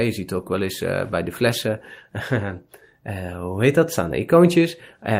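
Nothing stood out as a technical problem on listening to this speech.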